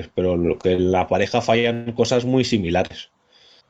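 Two short stalls from late packets interrupt the audio, at 0.75 s and 1.59 s. In each, the sound just before the stall is held for about 33 ms and 42 ms respectively, giving a brief sustained smear with a slight buzz or dip. Playback then resumes from the same point, so nothing is lost, but everything after each stall is pushed later by that amount. This is the pattern of a jitter buffer that ran dry because one packet arrived after its playout time. A longer call audio freeze follows from 1.74 s to 1.88 s. For about 128 ms the last sound is drawn out into a buzzing or hissing, decaying continuation rather than dropping to silence. The audio then picks up where it stopped, with no content missing and a further 128 ms of added delay. The likely cause is packets held up in transit long enough to empty the jitter buffer, with the receiver filling the wait.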